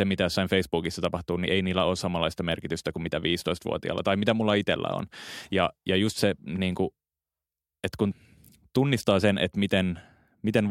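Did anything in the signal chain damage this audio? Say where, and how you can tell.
No, nothing along the signal chain shows any audible damage to this speech recording, with no stage of the path leaving a mark on the signal.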